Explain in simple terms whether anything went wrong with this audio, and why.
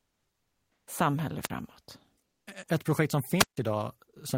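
The first 0.87 seconds show comfort noise in place of the background: the real room sound is replaced by a steady, featureless, slightly quieter hiss. The likely cause is a transmission system that pauses sending during silence and lets the receiver fill the gap with synthetic noise.

Two wireless microphone squelch dropouts follow, at 1.42 to 1.50 s and at 3.38 to 3.57 s, the second just after "projekt som". The radio signal fades, hiss briefly rises, and the receiver mutes the output for about 45 ms and 156 ms respectively.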